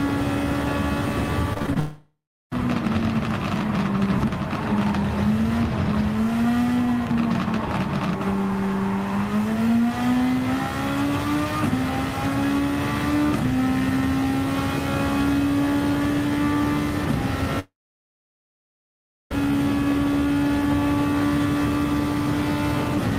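Between 1.53 and 1.77 s the audio turns choppy, the signature of repeated packet loss (robotic sound). Five short gaps, the longest about 26 ms, are each patched by extending the preceding sound, so roughly 42% of that quarter-second is filled-in material. On a spectrogram this shows as smeared, repeated harmonic slices with small notches between them, and the waveform looks stuttered and blocky.

Right after, from 1.79 to 2.53 s, the sound gives way to a fading buzz and then about 0.36 s of silence before resuming further on, with that stretch lost. A second, longer gap runs from 17.59 to 19.32 s, with about 1.6 s of it silent. Both are likely long network dropouts, in which the receiver keeps stretching the last audio until it dies away. On a waveform each appears as a brief decaying tail followed by a flat line, and on a spectrogram as a smear trailing off into an empty band before the signal abruptly returns.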